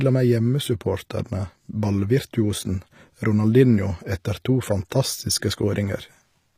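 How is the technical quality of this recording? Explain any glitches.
The recording has audible codec damage throughout. HE-AAC compression, from start to end: the upper spectrum, cut off at 15.5 kHz, sounds likely rebuilt by spectral band replication, fitting roughly 24 kbps, so s sounds come out gritty and lispy.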